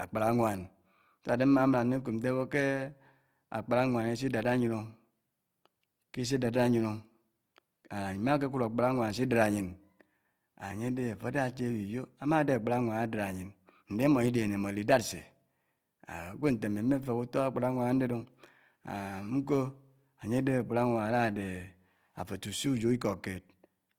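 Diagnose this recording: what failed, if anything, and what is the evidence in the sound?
The fault is at the codec stage. Throughout the speech, the sound is rough and grainy. Noise fills in fine detail instead of leaving gaps. The band still extends to 20.4 kHz. This is likely Opus compression in CELT mode, starved at a rate near 24 kbps.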